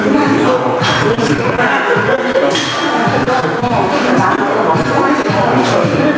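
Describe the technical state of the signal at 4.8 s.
Right around there, at 4.82 to 4.86 s, there's a short concealed packet loss. About 20 ms of audio never made it to the decoder in time, so the receiver papered over the hole by extending the last bit of sound and then easing back into the real signal. What you hear is a brief smear or wobble rather than a clean dropout.

The gain pumping running through the whole clip is also present at that moment. The gain swings by roughly 10 dB whenever something loud comes in. That squeezes loud and soft parts closer together and leaves everything sounding a bit squashed. The likely cause is gain cranked far too high on the mic, with a fast limiter or compressor yanking it back down on every peak. Nothing reaches above 8 kHz, which fits a G.722 call codec doing its normal thing.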